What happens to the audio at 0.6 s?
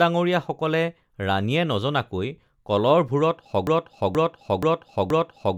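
Nothing goes wrong at 0.6 s; the speech carries on intact through that moment with no dropout, click or distortion.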